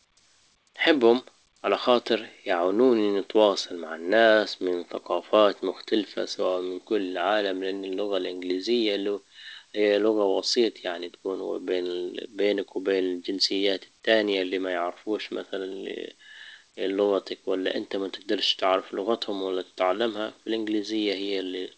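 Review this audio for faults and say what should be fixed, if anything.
Nothing stood out on listening to this speech as it comes through the G.722 call path, with its content stopping at 8 kHz, so there is nothing here that needs fixing.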